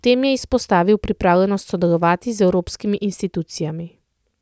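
No technical faults are audible.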